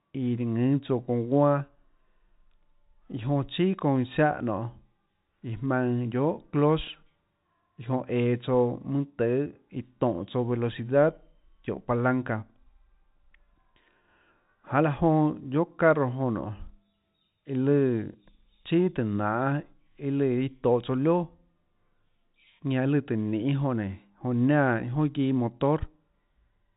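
No technical faults can be heard in the speech. The G.711 telephone coding is audible as a band limit, with nothing above about 3.8 kHz, and any quantisation noise from it is faint at most.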